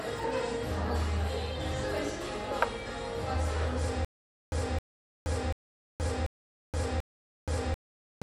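Throughout, MP3 compression, likely at a low bitrate around 64 kbps, starves weak frequency lines, so the audio sounds plainly watery and swirly, with smeared attacks. From 4.05 s to the end, a stutter with silent gaps sets in: the stream likely stalled, replaying a 0.26 s fragment five times, each followed by about 0.47 s of digital silence.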